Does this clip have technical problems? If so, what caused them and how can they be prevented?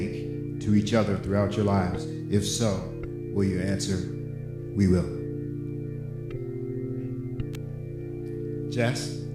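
Yes. A nearby switch, motor or static discharge likely arced and coupled into the audio line, producing an electrical switching spike: a sharp snap at 2.55 s and again at 7.54 s, each peaking around -20 dBFS on top of the sound. Shielded, balanced cabling routed away from switched mains loads and motors prevents it.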